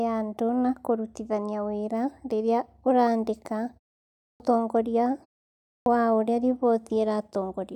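Clipped start after a pause at 4.30 s and again at 5.77 s: after pauses of about 0.6 s the output device slept and needed time to wake, so roughly 100 ms and 92 ms of sound were swallowed and speech resumes abruptly, missing its onset.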